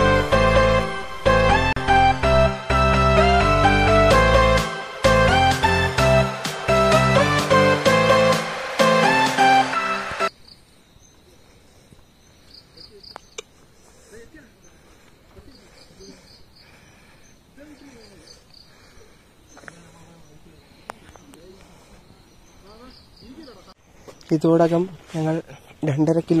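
A gap at a join of encoded pieces opens from 1.73 to 1.76 s: about 36 ms of untrimmed encoder delay and end padding between separately encoded pieces, after which the sound resumes where it stopped.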